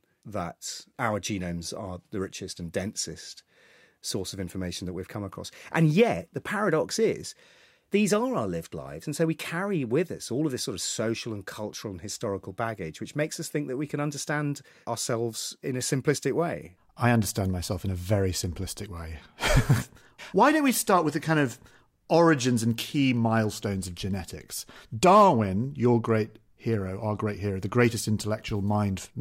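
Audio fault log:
No audible faults anywhere in this speech clip.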